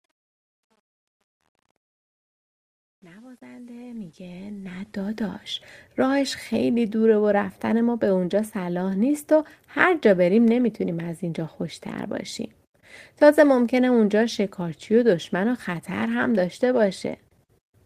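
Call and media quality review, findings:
Truncation distortion on a fade, 0.0 to 5.27 s: gritty onset, worst 0.0 to 4.03 s. Probable component: fade/gain stage. Undithered requantisation leaves the low-level waveform in coarse square steps, which fits roughly 10-bit resolution.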